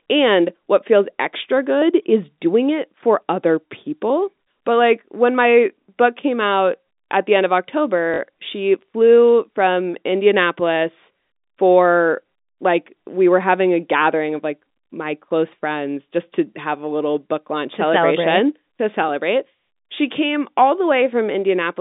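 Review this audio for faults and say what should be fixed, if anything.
Packet loss with last packet repeated at 8.14 to 8.18 s: 40 ms of sound (about two 20 ms packets) replays as a short robotic stutter rather than falling silent. It sits over a telephone-band G.711 line. Adding a jitter buffer with proper packet loss concealment would prevent this.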